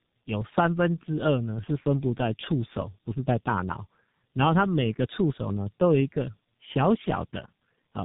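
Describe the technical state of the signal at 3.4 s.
Tandem speech coding is present at 3.4 s and runs through the whole clip: the speech has passed through two low-rate speech coders in a row, likely AMR-NB and then G.723.1, the second re-coding the first's damage. It sounds rough, muffled and warbly, with nothing above 3.8 kHz.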